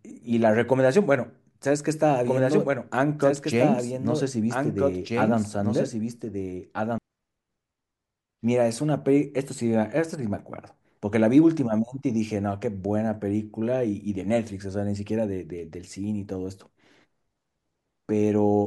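A doubled audio track from 2.24 to 6.98 s: a copy about 5 dB quieter lags 1.5 s, likely via slower path or misaligned edit.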